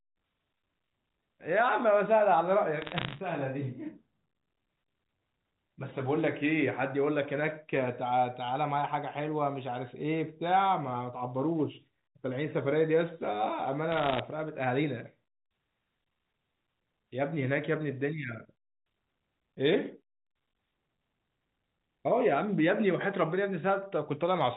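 Speech over a G.711 phone line carries bit errors on a digital phone line at 2.82–3.20 s and 13.92–14.19 s: sharp ticks and crackle over unchanged speech, from flipped bits, roughly under 1%, each corrupting one sample, unlike packet loss, which leaves gaps.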